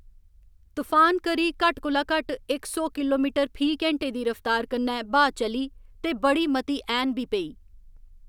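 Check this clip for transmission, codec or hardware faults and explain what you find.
One fault turns up, a repeated buffer at 4.02 s, just after "इक सौ किलोमीटर फी". It sounds like a tiny click or brief buzz in the speech. New audio arrived late, so the device replayed its last block of about 5.33 ms once, with hard joins. That length fits a 256-sample buffer, and no audio appears to be lost.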